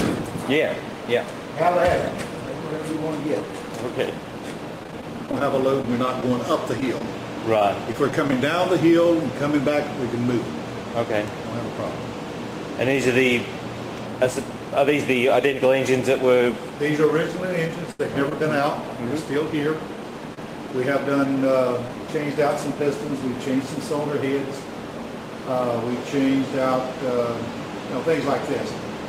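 From about 4.83 to 8.33 s you get scattered short gaps: a run of around twenty lost or late packets, each hole no longer than about 20 ms. The receiver papered over each one by carrying the previous sound forward, so roughly 200 ms gets concealed, around 7 percent of that stretch. It stays clear enough, but you'll catch a sprinkling of little ticks and smeared hiccups through there.

Later come three short stalls from a late packet, at 17.92, 18.29 and 20.34 s. Each time the packet missed its slot, the jitter buffer ran dry, and the receiver held the last sound until the packet showed up, then picked up where it left off. The holds last 76, 20 and 27 ms. Nothing actually goes missing, but the sound hangs a beat too long, with a faint buzz or dip.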